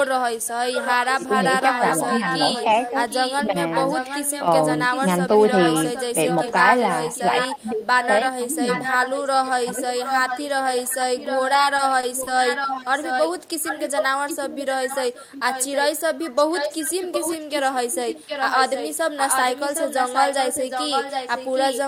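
From 0.03 s to the end, a second, delayed copy of the speech runs under the main signal, trailing it by about 0.76 s and sitting only about 5 dB below it. This is an echo leak. The far end is likely playing the call through a loudspeaker, and its echo canceller is letting much of that pickup back into the return path, so the talker hears themselves again about three-quarters of a second later.

Against that background, the speech suppressed in double talk appears as brief level dips: 1.27–1.31 s, 3.43–3.57 s and 9.72–9.77 s, each a shallow drop of about 5 dB. The deepest is at 7.48–8.49 s, where the speech sinks by about 20 dB for roughly half a second of that stretch. The likely cause is the echo canceller meeting overlapping talk. It could not tell the local talker from the returning echo, so it turned both down.

Between 11.53 and 12.29 s, the audio catches and drags in four small hesitations. 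These are repeated stalls (stutter). Each time, the jitter buffer ran dry while packets arrived late, and the receiver stretched the last sound to bridge the wait. The fills add up to 90 ms, about 12% of that span, and the longest single wait is 40 ms. Nothing is actually lost, but the rhythm stumbles.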